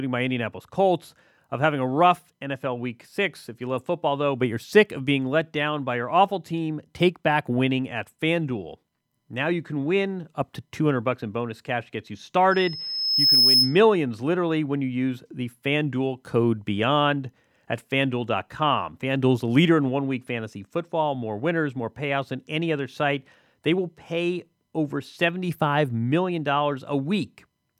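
Speech clip with loudspeaker feedback squeal from 12.51 to 13.81 s: a 5.2 kHz tone swells over under a second to about 5 dB above the speech, as the mic-to-speaker loop exceeds unity gain there.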